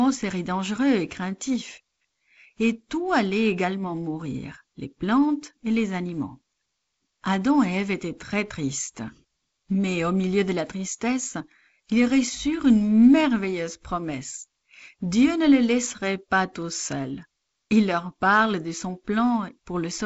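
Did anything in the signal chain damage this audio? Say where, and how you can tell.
No, nothing in the signal chain damaged this speech beyond what G.722 wideband telephone coding normally does, which leaves nothing above about 7.7 kHz.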